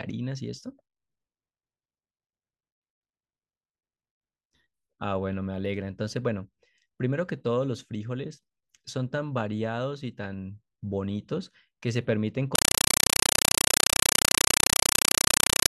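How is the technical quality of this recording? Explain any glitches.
The recording has one serious fault, a compressed stream played as audio. From 12.55 s to the end, the speech is replaced by very loud, chattering static. An AC-3 (Dolby Digital) bitstream was passed through as if it were ordinary PCM samples instead of being decoded. Each data frame plays as a 5.33 ms burst of noise followed by zero padding, repeating 31.25 times per second, which fits a stream of about 256 kbps. Unlike steady hiss or clipping distortion, it has a strict, buzzing rhythm of noise and silence.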